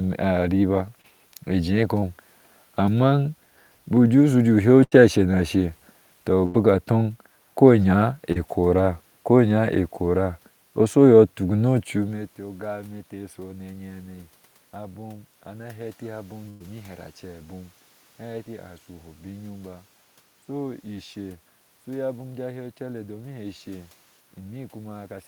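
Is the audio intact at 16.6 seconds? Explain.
No. A burst of packet loss runs from 16.49 to 16.62 s, just after "abem ana heti abom". The receiver stretches the last sound for about 107 ms, fading it as the gap continues, then resumes with about 100 ms of speech skipped.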